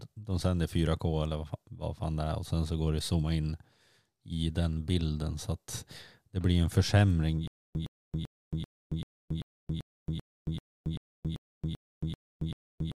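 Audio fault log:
7.48–12.99 s, stutter with silent gaps: right after "det blir en försämring", likely a stalled stream replaying its last buffered fragment at each retry. A 113 ms burst repeats 14 times, every 389 ms, with 275 ms of digital silence between, until the end.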